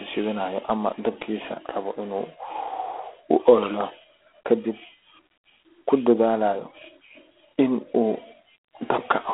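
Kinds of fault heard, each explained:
G.726 ADPCM: a harsh, rasping hiss rides on the speech and swells with its level, from coarse 24 kbit/s difference coding; nothing passes above 3.8 kHz.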